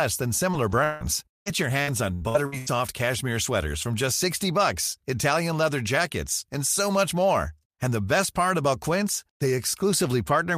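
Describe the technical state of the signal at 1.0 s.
At 1.0 s the speech sounds choppy and robotic, with a stuttering quality and pieces missing. This is repeated packet loss (robotic sound), running from 0.51 s to 2.68 s. Nine gaps strike in quick succession, the longest 164 ms, and each is papered over by extending the last stretch of audio. About 29% of the span is patched this way.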